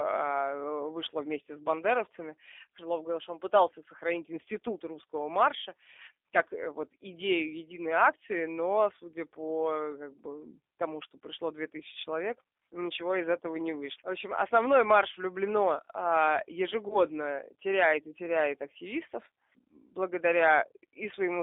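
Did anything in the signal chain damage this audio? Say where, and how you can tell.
Yes. At the codec stage, the whole clip passed through G.729, specifically the G.729A variant at 8 kbit/s. The speech is rebuilt from a vocal tract filter and pitch predictor with a few coded pulses per frame, so the sound has a rough, slightly synthetic texture throughout. The damage is plainly audible. The line band runs only from about 300 Hz to 3.6 kHz, so the lows and everything above 4 kHz are gone.

At the network stage, there is VoIP packet loss concealed by the speech codec from 16.88 to 16.98 s, between "основной марш влюблено а" and "теряет и теряет активистов". About 20 ms of audio went missing, which fits a single lost packet. The decoder filled the gap by extending its last pitch and filter settings with falling gain, giving a brief fading smear. The speech stays weak or distorted for tens of milliseconds afterwards while the frame-to-frame prediction recovers.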